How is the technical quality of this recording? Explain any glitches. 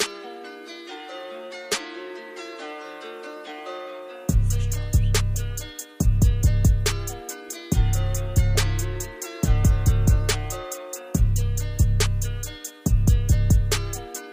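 The technical quality of this recording shows no glitches to explain.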